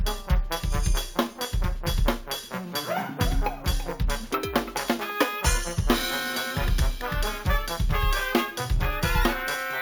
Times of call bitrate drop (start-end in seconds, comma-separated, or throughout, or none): none